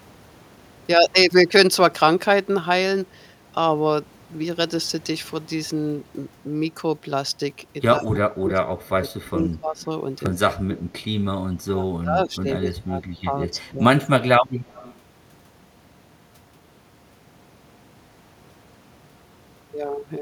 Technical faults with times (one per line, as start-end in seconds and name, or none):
7.99-9.91 speech suppressed in double talk
9.26-9.30 echo leak
9.81-9.85 echo leak
10.26-10.28 loud pop
10.46-10.79 speech suppressed in double talk
11.65-14.08 speech suppressed in double talk
14.69-14.95 echo leak